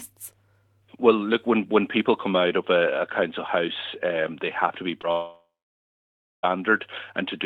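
Short concealed packet loss at 5.01 to 5.05 s: about 20 ms of the audio stream arrived too late for the decoder, and the receiver filled the gap by extending the preceding sound, copying its pitch where there was one and substituting shaped noise where there wasn't, before crossfading back into the real signal. The patch is brief, so it registers as a smear or wobble.

Long network dropout from 5.11 to 6.45 s: roughly 1.3 s of audio is gone, most likely because nothing reached the receiver during that stretch. What you hear is the last sound being carried forward as a decaying buzz or hiss for a few tenths of a second, then close to a second of silence, about 970 ms, before the audio resumes further along with the missing section simply absent.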